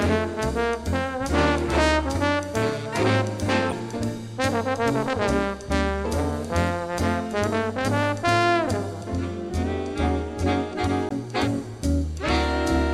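Damaged data in a compressed stream appears at 3.69 to 3.73 s and again at 11.08 to 11.12 s. Each time corrupted bytes throw the decoder off its frames for about 40 ms while it hunts for the next valid header, leaving a short chirp, click or hole in the sound.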